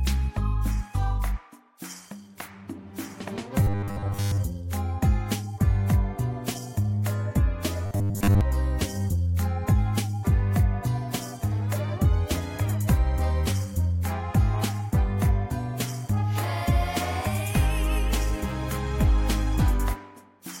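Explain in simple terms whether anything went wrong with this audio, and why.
Twice, from 3.63 to 4.41 s and again from 7.86 to 8.41 s, the sound turns into a rigid, metallic buzz pitched at 100 Hz, still loosely following its original shape. This is robotic sound from repeated short buffers. New audio is likely arriving too late, so the player keeps repeating its last tiny slice, about 10 ms long, which sets that fixed buzz. Most of the real audio in those stretches is simply skipped.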